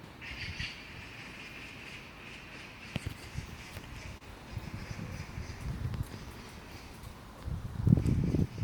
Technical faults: short concealed packet loss

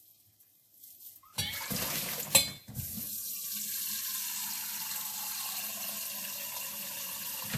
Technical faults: transcoding between lossy codecs

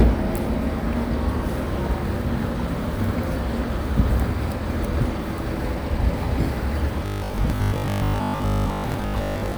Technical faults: robotic sound from repeated short buffers

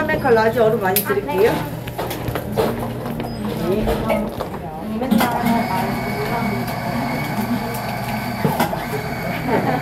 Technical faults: hard clipping

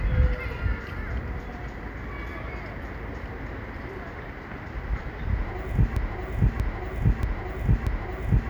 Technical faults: broken-record loop

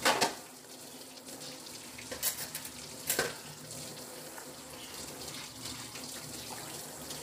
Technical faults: low-delay AAC compression

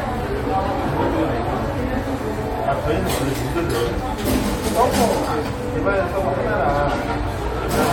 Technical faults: none

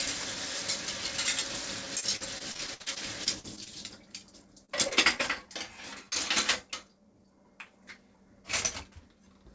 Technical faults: repeated packet loss (robotic sound); short concealed packet loss

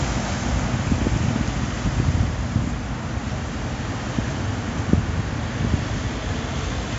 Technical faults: none

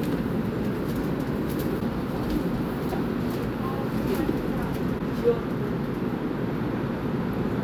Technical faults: broken MP3 bit reservoir

